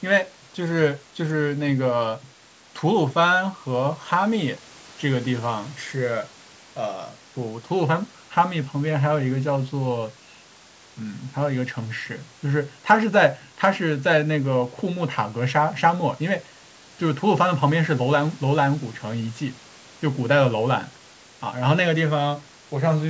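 No technical faults can be heard in the speech. It carries the expected sound of call microphone processing, with the lowest bass trimmed away and nothing present above 8 kHz.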